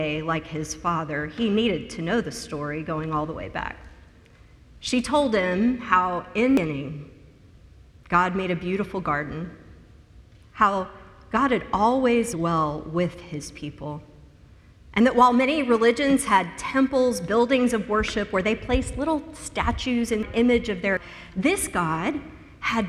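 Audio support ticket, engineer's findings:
Compressed frames skipped: decoder dropped whole frames (missing or rejected as damaged) at 6.57, 12.33, 20.23 and 20.97 s. Audio jumps forward about 0.3 s at the first, about half a second at the others, which fits several frames of roughly 93 ms each.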